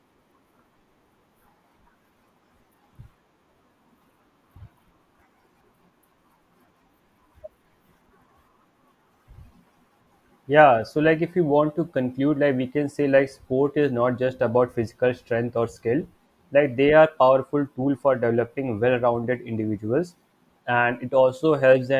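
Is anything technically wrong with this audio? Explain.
No, nothing technically wrong turns up anywhere in this speech recording.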